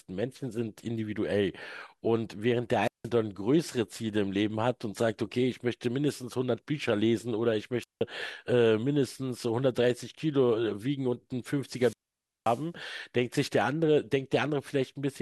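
Speech breaks up three times, from 2.81 to 3.10 s, 7.81 to 8.02 s and 11.69 to 12.67 s: hiss swells, the sound drops to near silence for about 0.17 s, 0.17 s and 0.53 s, then returns. This is wireless microphone squelch dropout, where the fading radio signal trips the receiver's mute.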